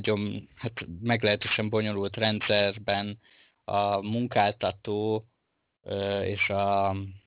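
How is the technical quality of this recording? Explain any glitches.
The recording has one real problem: aliasing across the whole clip. It sounds like a downsample with no filtering, which fits an 8 kHz rate, so highs fold back below 4 kHz. Sibilants come out gritty and metallic, and the folded energy sits fairly close to the speech level.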